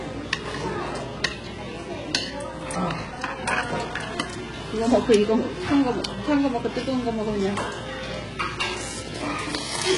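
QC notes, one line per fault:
Throughout, HE-AAC compression: nothing above 11.1 kHz, top end sounds pasted-up and gritty-metallic, fits roughly 12 kbps, likely HE-AAC band replication rebuilding the treble.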